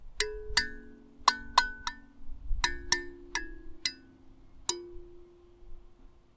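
No technical faults can be heard anywhere in this clip. The sound comes through a working call path and has nothing above 8 kHz, a band limit that fits a wideband codec such as G.722.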